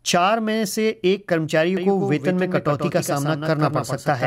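From 1.77 s to the end, a doubled audio track appears: a second full-band copy trails the original by around 150 ms, roughly 5 dB quieter, with no decay or room colour. It starts abruptly, likely from a slower capture path mixing in alongside the direct one.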